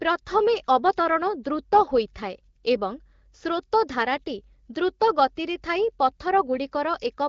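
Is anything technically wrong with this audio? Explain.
No, nothing is technically wrong with this audio.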